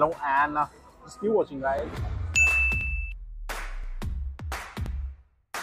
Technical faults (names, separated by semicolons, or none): overlapping chunks